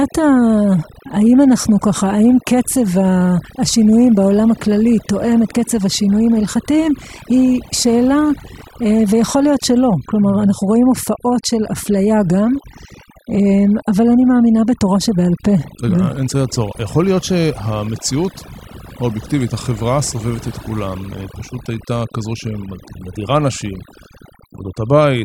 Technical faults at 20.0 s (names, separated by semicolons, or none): overdone noise removal